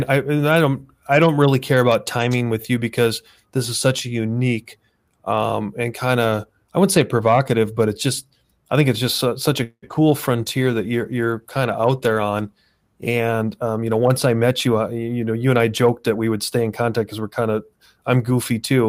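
Right after "it's just such a", from 9.63 to 9.85 s, the sound trails off as a fading buzz into about 80 ms of silence, then resumes intact. This is a call audio freeze, likely from delayed packets draining the jitter buffer and adding a 0.19 s gap.

At 9.88 and 9.94 s, two brief smears mark short concealed packet loss: about 20 ms each never reached the decoder, so the receiver extended the preceding sound over the holes.

From 10.56 to 14.08 s the audio turns coarser and duller, a call bitrate drop from 32 to 16 kbps, bottoming out for about 2.8 s as the encoder starved high frequencies.

From 13.17 to 14.99 s delivery sounds hurried at unchanged pitch, a jitter buffer speed-up running at 110% that trims roughly 0.2 s of pitch periods to reduce excess buffered delay.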